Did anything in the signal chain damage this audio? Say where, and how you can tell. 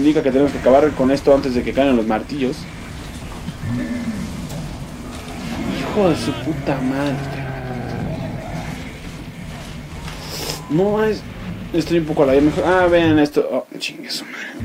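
No, nothing in the signal chain damaged this audio.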